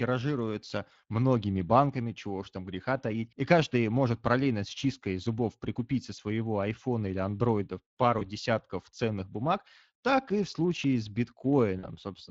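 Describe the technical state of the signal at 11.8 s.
Right at 11.8 s there's a short dropout handled by VoIP packet loss concealment: from 11.79 to 11.86 s the decoder filled about 40 ms, which fits two lost 20 ms frames. It stretched the last pitch and filter, so the sound smears into a buzzy tone or coloured noise that fades, and stays thin briefly afterward. Underneath that, the whole clip carries plainly audible Speex codec damage, which fits a setting around 20 kbps. The excitation is starved of bits, so the speech comes across hoarse and noisy, with the top band sounding like shaped noise rather than real detail.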